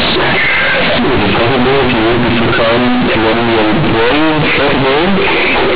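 Companded audio read as linear runs through the whole recording: A-law telephone bytes are played as plain 8-bit samples without expansion, so each sign change throws the waveform across half its range. The speech becomes harshly loud and buzzy, with heavy noise in pauses, all within the 4 kHz telephone band limit.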